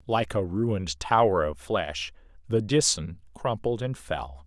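Nothing technical goes wrong anywhere in this bit of speech, so there's nothing to point to along the way.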